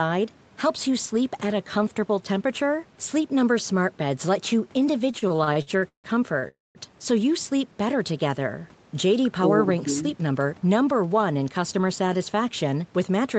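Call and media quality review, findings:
Repeated stalls (stutter), 5.11–6.45 s: ten short gaps, longest 158 ms, about 408 ms filled in total. Late packets drained the jitter buffer repeatedly, and the receiver stretched the last sound each time.

Call audio freeze, 6.48–6.78 s: 267 ms hold, decaying into 190 ms of silence before resuming where it stopped. The likely cause is delayed packets emptying the jitter buffer.

Jitter buffer speed-up, 9.70–10.62 s: playback runs at 110% with unchanged pitch and sounds hurried. The buffer trimmed roughly 100 ms of pitch-period segments to cut the backlog.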